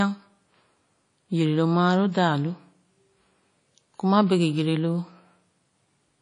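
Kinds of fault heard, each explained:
WMA compression: The speech has a ringing, washy coating from start to end, and the damage is plainly audible. A hiss rises and falls with the sound, breathing as it goes. The cause is likely Windows Media Audio, a transform codec. Its quantisation noise smears across tens of milliseconds around each sound. Quieter spectral detail drops out entirely. The thin result points to a low bitrate, around 32 kbps, too low to keep weak components.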